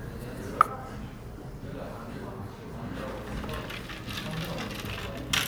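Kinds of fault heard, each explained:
No faults turn up here at all, so there's nothing to list or explain for this recording of sounds.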